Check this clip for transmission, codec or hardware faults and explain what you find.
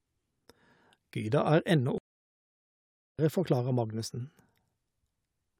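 One fault is audible, a playback stall. From 1.98 s to 3.19 s the speech halts mid-flow and the output goes silent for 1.21 s before resuming. The player likely ran out of buffered data or had its output thread blocked. Nothing was sent out until it recovered.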